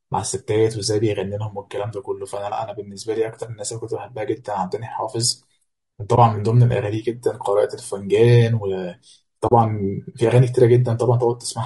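Speech runs throughout with a rough, grainy texture, with noise filling the gaps between the voice's harmonics and a thin, somewhat synthetic top band. This is likely low-delay AAC compression, AAC-ELD working at a low bitrate around 32 kbps. Its short analysis frames cannot resolve pitch harmonics finely and spend bits inefficiently, so the damage is plainly audible. The graininess tracks the voice itself, which separates it from background hiss that would sit steadily under pauses. Two brief holes also appear, from AAC frame loss with muting: one at 6.15–6.19 s, consistent with a single lost 20 ms frame, and a longer one at 9.47–9.52 s, fitting two lost frames (40 ms). The decoder zeroed the missing spectrum, and the overlapping windows fade the sound out and back in. The result is a soft-edged gap, unlike a hard sample dropout, which snaps off abruptly.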